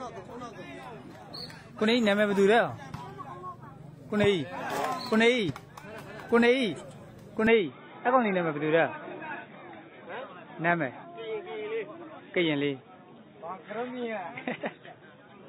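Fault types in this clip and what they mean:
Input switched to a poorer device: from about 7.47 s the sound abruptly narrows to nothing above 3.8 kHz, likely a swap to a lower-grade microphone or headset profile.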